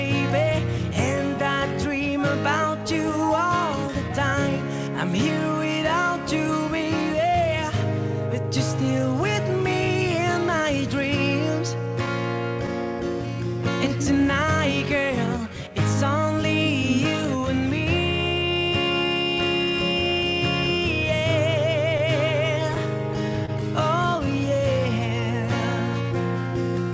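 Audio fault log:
throughout: clock drift between sender and receiver. The sending side's clock runs about one and a half percent slow against the receiver's. The receiver's buffer keeps draining as a result. It has to stretch the sound again and again to keep playing, so small timing hiccups recur across the clip at uneven spacing. The band stops at 8 kHz, which fits a G.722 call path at 64 kbps.
0.93 to 20.09 s: repeated timing corrections. The receiver keeps repeating short pieces to make up for the slow sender. Playback runs at 99 percent speed over this stretch. Roughly a third of a second is added in total. Each edit is small and goes the same way. Together they are heard, if at all, as faint hiccups and a slightly dragging, unsteady tempo.
23.46 to 23.50 s: short stall from a late packet. A packet arrived late and the buffer ran empty. The receiver held the last sound for 25 ms until the packet came in. 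Playback then resumed from the same point, so nothing is lost. The delay grows by 25 ms. It sounds like a brief held sound with a slight buzz or dip.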